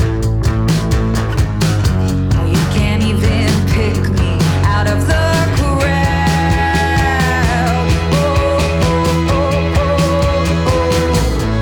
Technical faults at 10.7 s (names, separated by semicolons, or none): none